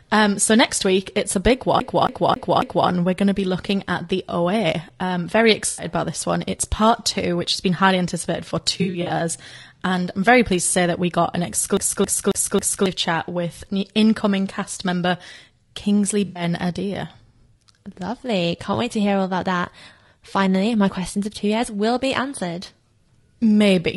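Right through the clip the speech sounds rough and grainy, with noise between harmonics and a thin top end, likely low-delay AAC compression at around 32 kbps. From 1.80 to 2.89 s, after "week it's a big", it's a CD stuck on one turn: a 0.27 s chunk loops four times, muted at each jump. AAC frame loss with concealment leaves smeared, noisy patches at 5.68 to 5.86 s and at 16.25 to 16.43 s, each about 100 ms, where the decoder fills the gap from the last good spectrum. After "been highly anticipated for", from 8.78 to 9.12 s, the gaps are scattered, the longest about 70 ms. The skip returns from 11.77 to 12.86 s, between "that we got an" and "chat with incoming cast".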